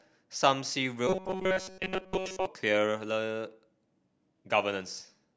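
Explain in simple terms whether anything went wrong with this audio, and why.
Robotic sound from repeated short buffers appears from 1.07 to 2.46 s. The speech turns into a stiff, metallic buzz pitched at 188 Hz, while still roughly following the words. The likely cause is that new audio arrived too slowly, so the playback kept repeating a tiny snippet, about 5 milliseconds long, to fill the gaps. Most of the real sound in that stretch is skipped, and the constant repetition sets the fixed buzzing pitch.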